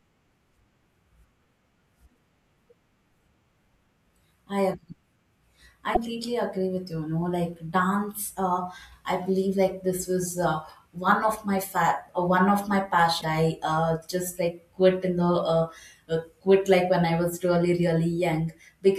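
Damaged data in a compressed stream appears at 5.92 s, a burst of about 50 ms just before "agree with you", and again at 13.19 s, lasting about 50 ms between "uh one of my" and "I uh just like". Each time a stretch of the coded speech arrives corrupted, so the decoder misreads those frames, loses its place and hunts for the next valid frame header. The result is a brief chirp, squawk, click or short hole cutting into the speech.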